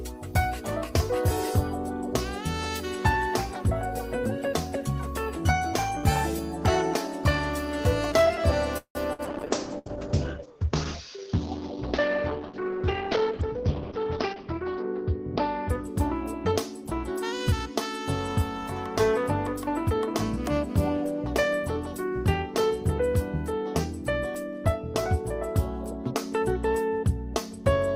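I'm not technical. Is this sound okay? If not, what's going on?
No. At 8.77 s the sound stalls for about 0.2 s, trailing off into a brief hush before carrying on. This is likely a call audio freeze: nothing is lost, the sound is just late. At 9.13 s and again at 9.79 s there are bursts of packet loss, each a short fade of about 0.06 and 0.07 s. Unlike the freeze, a small piece of sound is actually skipped. From 9.29 s to 16.24 s a call bitrate drop makes everything muffled and rough, as if heard through a wall. From 12.93 s to 14.49 s a jitter buffer speed-up makes the sound run about 10% fast at the same pitch, so it sounds hurried rather than high.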